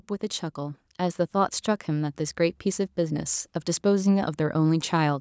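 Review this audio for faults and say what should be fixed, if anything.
Automatic gain rising runs from 0.19 to 2.24 s. The gain control judged the incoming speech too quiet and lifted its level by about 5 dB across those two seconds, so voice and background noise swell together. On a waveform, the envelope widens steadily through that span, including the quiet gaps. On a spectrogram, the whole band brightens evenly, up to the 8 kHz ceiling set by the call's microphone processing. To prevent it, set a proper input level before recording, or give the AGC a fixed starting gain so it doesn't have to ramp up.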